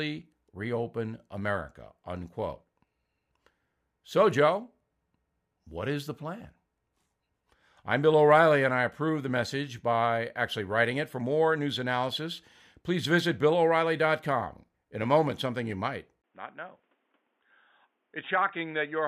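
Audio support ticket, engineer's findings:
Speech dulls and turns boxy from 16.22 s to end; brief dropout of about 20 ms at 16.22 s. Likely cause: input switched to a poorer device, e.g. fallback mic or headset call profile. New path band-limited, nothing above 3.7 kHz. Level drops by roughly 10 dB, new noise floor roughly 40 dB under signal. Spectrogram: hard ceiling at 3.7 kHz after the gap. Waveform: short flat gap, then smaller envelope.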